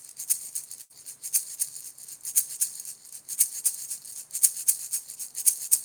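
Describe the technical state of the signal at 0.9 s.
At 0.9 s the signal is inside a burst of packet loss running from 0.81 to 0.92 s. About 80 ms of audio never arrived, so the receiver extended the last received sound and faded it down. The sound resumes further on with that stretch skipped. A spectrogram shows smeared, repeated energy dimming across the gap, then an abrupt restart.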